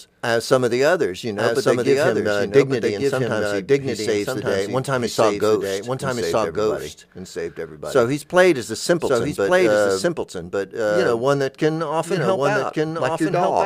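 Speech runs throughout with a dry, full-band second copy trailing about one second behind and about 5 dB quieter, a doubled audio track, likely from the signal being captured twice through a slower path.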